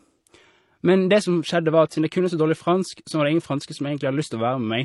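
Throughout the speech there is nothing above about 11.4 kHz, and two different kinds of coding damage are heard together. The likely cause is transcoding between lossy codecs. The pattern points to an MP3 encode at around 48 kbit/s followed by HE-AAC at around 32 kbit/s, with the second encoder spending its limited bits on the first one's artefacts while adding its own.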